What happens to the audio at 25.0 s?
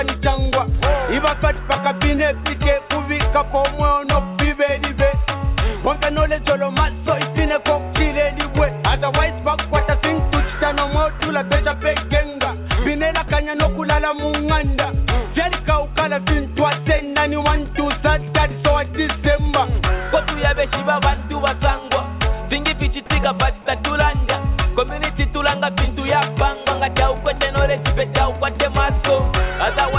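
Nothing goes wrong at 25.0 s: the sound carries on intact through that moment, still band-limited to the narrowband call path with nothing above 4 kHz, and no dropout, glitch or other fault occurs there.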